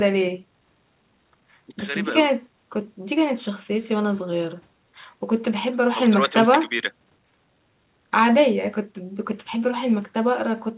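Listening to this speech, which has the narrow telephone-band sound of a call path with nothing above 4 kHz, consistent with G.711 A-law at 64 kbps, nothing stood out as a technical problem.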